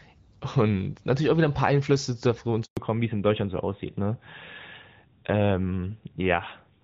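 At 2.65 s the speech fades out within a few tens of milliseconds and stays silent until 2.77 s. This 120 ms handover gap is where the call moved between networks and no speech frames arrived during the switch. It differs from an ordinary dropped packet, where concealment usually fills the hole with smeared or repeated sound. Here there is a clean silence, and whatever was said in that span is gone.

From 2.77 s to the end, the call falls back to narrowband. Before the switch the speech has the fuller clarity of HD Voice, which fits AMR-WB at around 12.65 kbit/s. After it, everything above 4 kHz disappears and the speech turns duller and rougher, consistent with AMR-NB at about 12.2 kbit/s. A simple low-pass filter would only muffle the sound. This change also adds the grainier texture of the older codec, and it starts right at the end of the gap.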